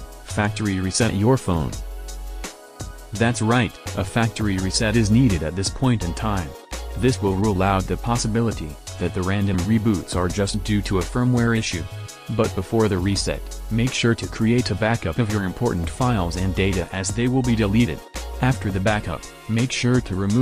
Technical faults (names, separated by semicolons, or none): none